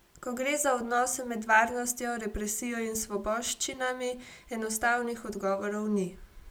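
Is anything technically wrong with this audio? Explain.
No, nothing technically wrong is audible in this speech recording.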